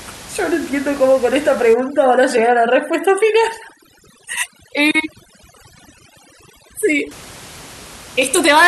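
A speech recording in which overdone noise removal takes hold from 1.74 to 7.11 s: the room noise, about 21 dB below the voice before and after, drops and breaks up into twinkling specks, while quieter parts of the voice go with it as over-aggressive suppression pulls those bands down along with the noise. Low-bitrate codec smearing would not also empty the background like this.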